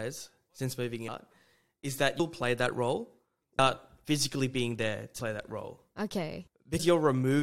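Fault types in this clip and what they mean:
Compressed frames skipped: Whole 23.2 ms frames go missing, so the speech jumps ahead. Five brief smeared blips each drop roughly a tenth to half a second.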